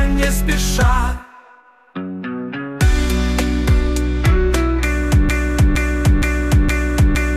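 From 5.29 s to the end, a fragment of about 0.47 s repeats exactly, back to back, four times, in a broken-record loop, and whatever should have followed never arrives. Likely cause: the player, encoder or stream stalled and kept resending the last fragment it held.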